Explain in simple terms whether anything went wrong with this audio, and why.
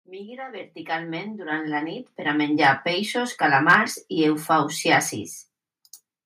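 Around 3.69 to 3.76 s the loudest stretch of speech turns harsh and crackly, as if its tops were sheared off. That is microphone overload, likely caused by the input level being set high enough that those peaks hit the converter's ceiling and were flattened.

At 4.08 s and again at 5.1 s the whole recording, voice and background together, suddenly gets a little quieter in one step. This is the microphone volume being stepped down, likely by the call software reacting to the microphone being too loud or clipping.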